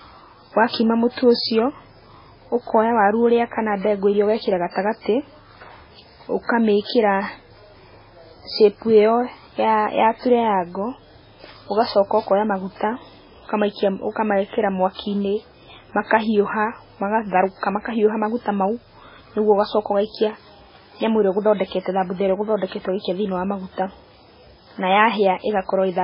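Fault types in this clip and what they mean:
MP3 compression: likely low-bitrate MP3 encoding, roughly 16 kbps, leaving nothing above 5.3 kHz; spectrogram shows a hard ceiling, flickering gaps; speech sounds watery.
Pre-echo: quantisation noise smeared ahead of attacks at 0.69 s and 6.86 s, about 40–50 ms; waveform shows short hiss before each onset.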